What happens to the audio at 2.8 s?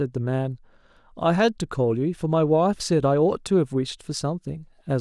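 Nothing goes wrong at 2.8 s; the speech carries straight through that moment with no dropout, click or distortion.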